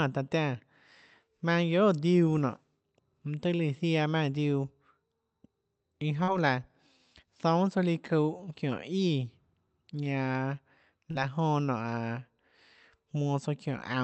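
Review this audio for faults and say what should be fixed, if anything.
Short concealed packet loss occurs twice in this speech, from 6.23 to 6.30 s and from 11.11 to 11.18 s. Each time about 40 ms of audio reached the receiver too late or not at all, and the decoder extended the preceding sound for roughly 36 to 38 ms before crossfading back into real audio. The result is a brief smear or wobble in the voice, with any short consonant there possibly lost. Audio coming through the call path is limited to about 8 kHz. A larger jitter buffer, or forward error correction on the Opus stream, would prevent these gaps.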